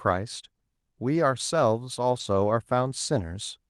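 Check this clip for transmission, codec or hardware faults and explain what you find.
Two brief transmission faults are present, both lost packets rebuilt from error correction, at 1.15–1.17 s and 2.19–2.21 s. Each span fits a single lost 20 ms packet. The decoder played the low-bitrate redundant copy carried in the next Opus packet, so there is no gap. Instead, those moments sound briefly rougher and noisier than the surrounding speech, which has a band limit near 12 kHz.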